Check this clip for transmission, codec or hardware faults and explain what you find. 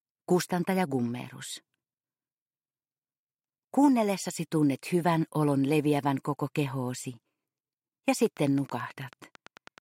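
There is one fault, a train of clicks near the end. From 8.26 s to 9.79 s, a steady ticking sits over the sound: about fifteen sharp, near-identical pops at a regular rate of about 9.2 per second, peaking a few decibels above the surrounding audio and clearly audible against it. Their uniform shape and even spacing point to a repeating external pulse, likely electrical interference from nearby equipment or a faulty connection or power supply.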